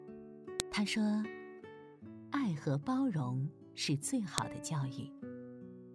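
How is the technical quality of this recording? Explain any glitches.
Two sharp glitches break the recording. A file header played as audio causes a loud click at 0.6 s and again at 4.38 s. Header bytes left in at each joined piece play as samples, giving an abrupt snap.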